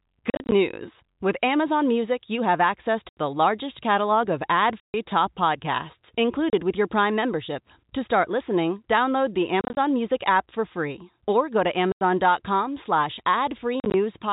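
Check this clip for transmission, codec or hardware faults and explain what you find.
The speech has one fault: packet loss filled with silence. It occurs seven times, at 0.3–0.52 s, 3.09–3.17 s (between "you have access" and "the largest catalog of"), 4.8–4.94 s, 6.5–6.53 s (between "top podcasts" and "with your"), 9.61–9.77 s, 11.92–12.01 s (after "free or go to") and 13.8–13.94 s. Each gap lasts a whole multiple of about 10 ms, which points to 10 ms packets. Missing packets were replaced with digital silence. Each hole has hard edges. Three events are scattered dropouts, with runs no longer than 40 ms. The underlying G.711 A-law telephone coding audibly caps the band at 4 kHz.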